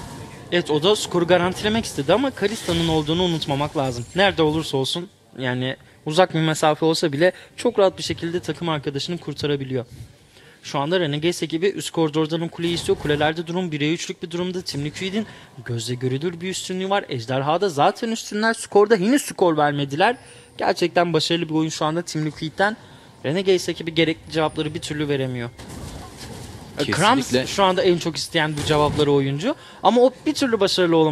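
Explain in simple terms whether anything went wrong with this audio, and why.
Nothing went wrong here.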